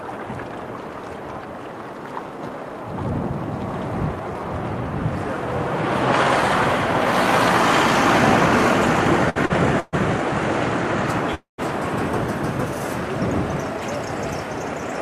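A recording of everyday sounds is disrupted by packets arriving late over a call link. Two short stalls from a late packet occur at 9.29–9.38 s and 9.46–9.52 s. Each time, the next packet was not ready when due, so the jitter buffer emptied and the receiver held the last sound, for about 61 ms and then 43 ms, until the packet arrived. The sound drags briefly with a slight buzz or dip and then picks up exactly where it left off, so nothing is lost but playback falls slightly further behind. Two call audio freezes follow, at 9.80–9.95 s and 11.35–11.60 s, likely caused by longer holdups of packets in transit that drained the buffer completely. The receiver extended the last sound as a fading buzz or hiss, about 128 ms in the first freeze, with roughly the final 10 ms gone silent, and about 236 ms in the second, where roughly 140 ms of that is silence. When the packets arrive, the audio resumes from where it stopped, so these are inserted gaps rather than missing sound.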